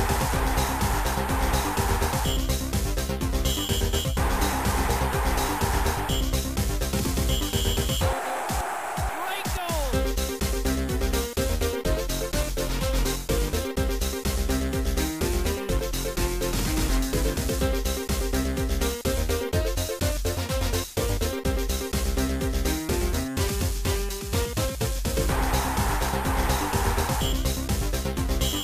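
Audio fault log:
No technical faults turn up anywhere in this recording; the signal stays continuous and stable throughout.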